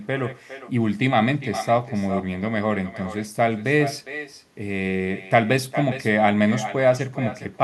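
Echo with no canceller, throughout: the far-end loudspeaker leaks into its microphone uncancelled, returning a thinner copy about 12 dB down, roughly 400 ms late.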